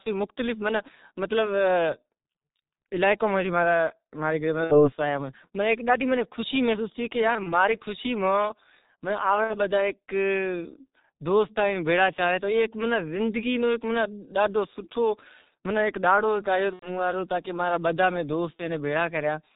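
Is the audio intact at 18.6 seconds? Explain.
No. From 18.56 to 18.63 s there is VoIP packet loss concealed by the speech codec. The decoder filled the gap by repeating its last pitch and filter at falling gain, which fits a single lost 30 ms frame. The speech is briefly stretched and fades, staying weak just after.

The G.723.1 codec also runs through this moment. Heavy coding damage leaves the speech muffled and hoarse, with nothing above 4 kHz and blurred consonants. That points to a rate near 6.3 kbit/s and a slowly updated voice model.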